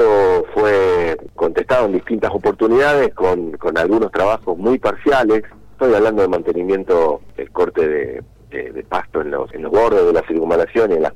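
No technical faults are audible.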